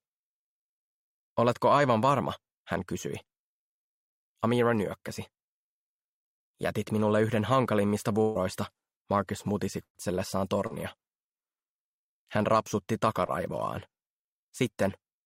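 At 8.21 s there's a burst of packet loss running to about 8.37 s. Roughly 140 ms of the stream never made it, and the receiver papered over about 135 ms of that by stretching out the last bit of sound and letting it fade. You hear a held, fading tail instead of what should be there, then the audio jumps ahead. The second burst, 9.83 to 9.97 s, loses about 120 ms. This time the concealment fades out completely, leaving about 60 ms of outright silence before things pick back up.

Then there are two smaller hits, each a short concealed packet loss. At 10.67 to 10.72 s about 40 ms went missing, and around 30 ms of it got filled by extrapolating the preceding sound before blending back in. At 13.26 to 13.30 s it's a 20 ms gap, filled the same way. Both come across as quick smears or wobbles, and a brief transient can get swallowed in there.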